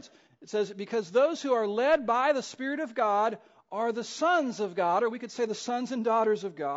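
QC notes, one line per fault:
Throughout: low-delay AAC compression. The speech carries plainly audible codec damage across the whole clip, most likely from AAC-ELD, the low-delay AAC variant used in video calls. Its short frames, roughly 10 ms each, give coarse frequency resolution, so pitch harmonics are poorly separated and each frame costs more bits to code cleanly. The level of damage fits a bitrate around 32 kbps, where too few bits remain to hide these errors.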